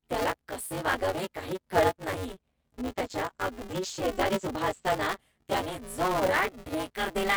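Right from the start, and running the whole way through, there's buffer tearing: a steady robotic buzz at about 188 Hz riding on the speech, dropping away in the gaps. The app writing the ring buffer and the hardware reading it have drifted out of step, so they cross every period. That rate fits a 256-sample buffer, and a bit under half of each one is stale audio from roughly 15 ms back, hard-spliced on both sides.

Then at 2.81 s, just after "वागावे काही कळत नाही", comes a call bitrate drop. The bandwidth estimate fell and the encoder got squeezed; it sounds like something in the region of 40 kbps going down to about 11 kbps. The top end gets chopped from 20 kHz to 8 kHz, so the speech turns muffled and a bit watery, worst for a stretch of about 1.1 s, before recovering by 5.23 s.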